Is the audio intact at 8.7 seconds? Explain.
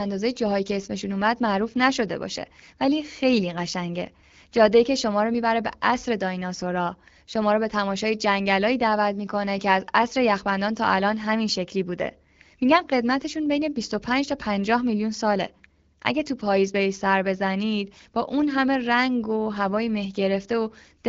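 Yes, at 8.7 seconds the speech is intact, with no dropout, click or other fault at that moment.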